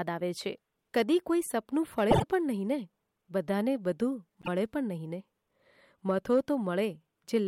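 At 2.10 to 2.24 s the speech stutters from repeated frames: a 24 ms block, which fits a single compressed frame, plays three extra times, adding 72 ms. At 4.41 to 4.48 s the same fault repeats a 24 ms block once, adding 24 ms.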